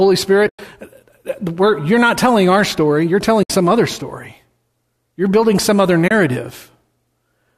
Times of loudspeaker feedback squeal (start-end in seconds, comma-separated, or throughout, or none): none